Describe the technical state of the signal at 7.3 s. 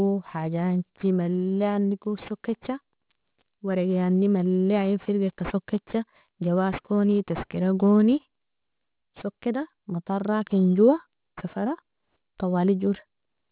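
At 7.3 s, as across the whole clip, aliasing is present: the speech was downsampled without filtering, which points to an 8 kHz rate, so content above 4 kHz folds back about 20 dB down as gritty, metallic sibilance.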